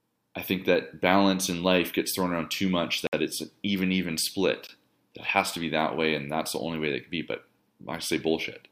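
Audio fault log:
3.07–3.13 s and 4.67 s, Bluetooth stall: the speech drops to dead silence for about 61 ms the first time, then for a shorter 18 ms blip the second time, and carries on again after each gap. The likely cause is radio interference holding up packets on the wireless link, so the headphones' buffer runs dry and playback simply stops until the resent data turns up, which is why the gaps are clean silence rather than noise.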